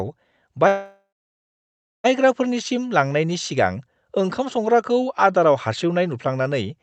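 From 0.67 to 2.06 s there is a call audio freeze. The sound stretches into a fading buzz, then about 1 s of silence. Delayed packets likely drained the jitter buffer. Speech resumes where it stopped, with nothing lost, below a call codec's 8 kHz cut-off.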